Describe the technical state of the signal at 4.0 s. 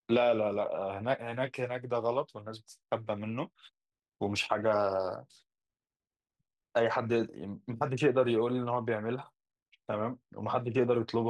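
At 4.0 s the speech signal is intact, with no fault audible at that moment.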